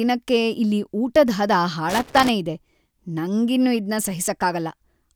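A speech recording with loose connector crackle from 1.90 to 2.29 s: an irregular burst of scratching as a worn contact rapidly makes and breaks, chopping the signal. Its uneven, gritty clustering separates it from evenly spaced digital clicks or buffer dropouts.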